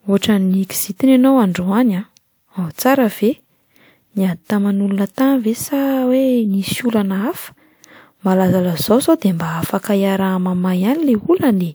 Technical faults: none

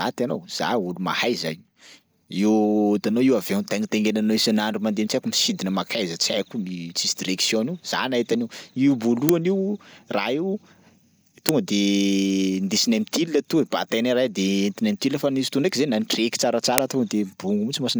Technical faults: uninitialised buffer

